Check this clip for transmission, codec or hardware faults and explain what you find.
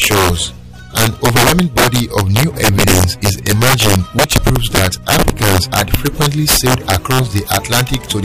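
There is one fault, present through the whole clip: integer overflow. On every loud peak the audio breaks into harsh, violent cracks, far sharper and more explosive than ordinary clipping distortion. The level was pushed about 8 dB beyond what the integer format can hold, and instead of being limited at full scale, samples that exceed the maximum wrap around to the opposite extreme. Only a few percent of samples cross that line, but each one jumps across the entire range, producing the sudden snapping bursts.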